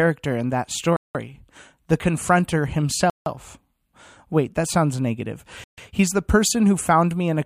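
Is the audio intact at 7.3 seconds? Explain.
Yes, the speech at 7.3 seconds is intact, with no audible fault at that moment.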